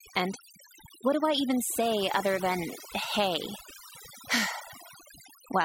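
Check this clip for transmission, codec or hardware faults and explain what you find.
The clip has one fault, present from start to finish, and it comes from processing rather than the link or the hardware: overdone noise removal. A noise reduction stage was set far too aggressively for this speech recording. It cuts individual frequency bands hard whenever their level sits near its noise estimate, and the softer parts of the speech fall under that threshold too. The background drops and breaks up into twinkling specks.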